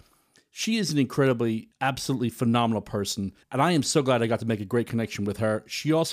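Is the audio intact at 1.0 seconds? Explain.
Yes, the speech at 1.0 seconds is intact, with no audible fault at that point.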